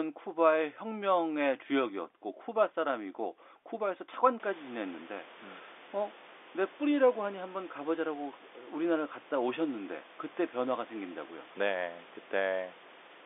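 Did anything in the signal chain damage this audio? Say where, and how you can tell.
No, nothing in the chain seems to have damaged this one; the room noise that comes up around 4.5 s belongs to the recording itself, and the telephone-band coding leaves the speech narrowband without adding any harm you can hear.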